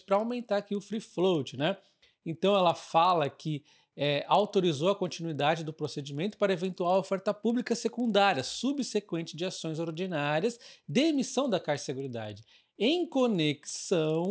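A resampler restarted on every block runs through the whole clip. The ticking repeats at 20 per second, which fits a conversion from 48 kHz down to 16 kHz carried out in 50 ms blocks, each handled in isolation. At every block boundary the filter lacked the real neighbouring samples, so each edge comes out slightly wrong. The ticks ride on the sound and drop away in silent stretches.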